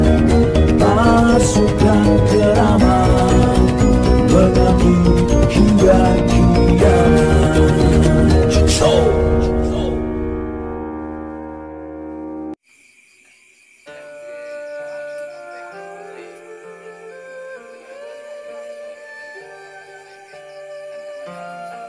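Nothing in the recording stood out as a technical problem on listening.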